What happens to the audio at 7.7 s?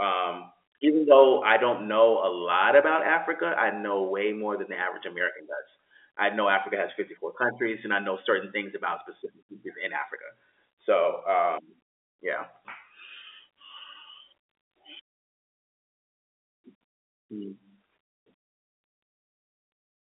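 Nothing goes wrong at 7.7 s: the speech there is intact, carried as usual through the G.711 telephone coding with its narrow line band and nothing above about 3.8 kHz.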